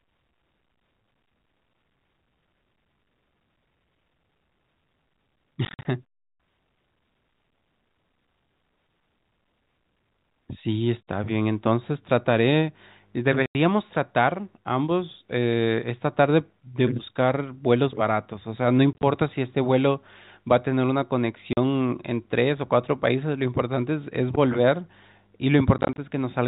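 Speech over a telephone-band line with packet loss filled with silence. Dropouts cut in at 5.65–5.85, 13.46–13.55, 18.93–19.03, 21.53–21.57 and 25.78–25.98 s. Each gap is a multiple of 10 ms, which fits 10 ms packets. Some are scattered short holes. Lost packets play as silence with hard edges.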